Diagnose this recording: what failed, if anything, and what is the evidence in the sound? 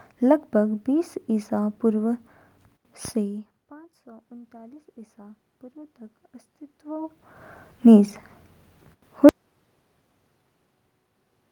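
Automatic gain rising, 3.18 to 6.03 s, in call processing. Just before, near 3 s, the talker moves away and the input falls by about 24 dB. The AGC then raises its gain by about 6 dB over nearly three seconds, lifting voice and room noise together.

Audio dropout to silence, from 9.29 s to the end, at the capture input. Speech cuts off mid-flow into silence with no room tone underneath, which points to a likely lost input, such as a disconnected device or a stray mute, while the recorder kept writing silence.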